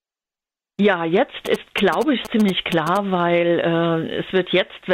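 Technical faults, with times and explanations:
1.46–2.97 s GSM signalling bursts: a nearby 2G phone's rectified radio pulses make galloping 217 Hz ticks about 10 dB down, seen as regular vertical stripes on a spectrogram.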